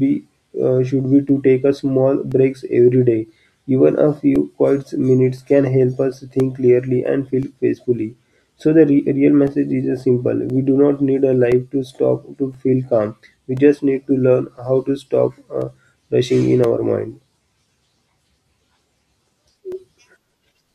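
A speech clip with periodic USB or driver dropouts. Starting just after "should be" at 1.29 s and running to 19.72 s, a tick sounds every 1.024 s, about twenty in all. Each is a brief gap of roughly 2 ms filled with silence, as the driver or bus stalls.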